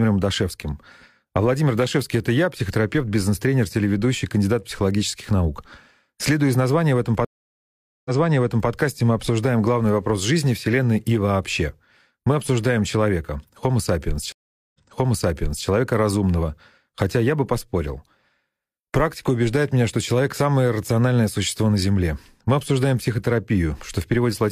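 Stream reconnects at 7.25 s and 14.32 s: each time the connection broke, the speech drops to silence for 0.8 s and then 0.42 s. A fresh decoder resumes the stream slightly behind, repeating 0.65 s and then 0.93 s already heard.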